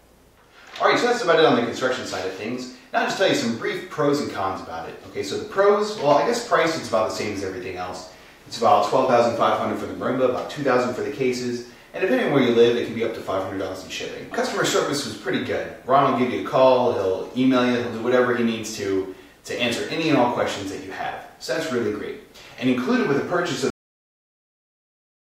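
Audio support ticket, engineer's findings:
Cut-off end at 23.70 s: audio stops mid-sound, straight to digital silence through to end, no decay tail. Final buffers never written or played out by recorder/output stage. Waveform shows abrupt edge to flat silence; spectrogram shows vertical wall, then blank.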